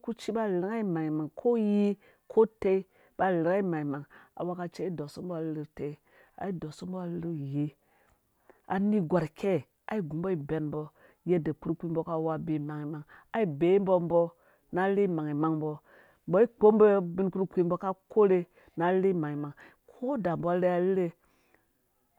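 A speech recording, with nothing technically wrong with it.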